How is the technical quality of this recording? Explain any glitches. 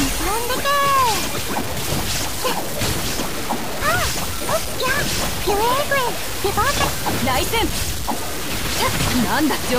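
The technical quality is poor, with one fault heard across the whole clip.

Low bit depth without dither, throughout: the audio is likely reduced to about 4 bits and truncated with no dither, so the rounding error tracks the signal. The result is harsh, grainy distortion only about 10 dB below the sound, with quiet passages sputtering or dropping out.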